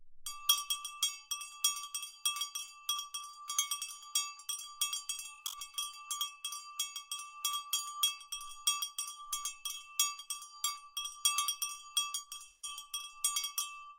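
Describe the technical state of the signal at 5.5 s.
At 5.5 s you're inside a patch of AAC frame loss with concealment, running 5.34 to 5.60 s. About 170 ms of frames drop out, scattered in short bursts. The decoder patches each gap from the last good spectrum, so it comes across as a smeared, noisy, phasey blur.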